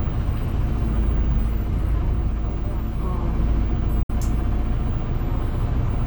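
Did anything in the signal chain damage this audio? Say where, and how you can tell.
Yes, at the wireless link: the sound goes silent from 4.03 to 4.10 s and resumes having skipped 61 ms, likely a Bluetooth dropout of late packets.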